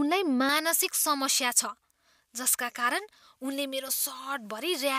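From 0.49 s to the end, the speech has pre-emphasis left on. The treble was lifted before recording or transmission, and the matching de-emphasis was never applied afterwards. The highs sit about 11 dB above the 1 kHz level at 10 kHz. The shape of that lift fits a J.17 curve. The voice sounds thin and overly bright. Sibilants hiss and stand out sharply, while the lower body of the sound feels weak.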